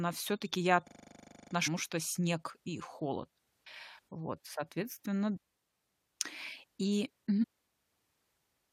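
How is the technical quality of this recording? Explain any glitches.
The recording has two kinds of glitch: one freeze-and-repeat near the start and three brief bursts of corrupted sound spread through the speech.

A system hang loop runs from 0.88 to 1.52 s. The playback system stalled while the audio hardware kept replaying the same 40 ms buffer, 16 times at 25 Hz. The result is a rapid, rattling stutter on one frozen fragment.

Damaged data in a compressed stream occurs at 1.66–1.68 s, just before "что снег и холод", at 5.35–5.38 s, and at 7.42–7.44 s. Corrupt bytes made the decoder misread frames and lose sync, so each spot is a short chirp or blip.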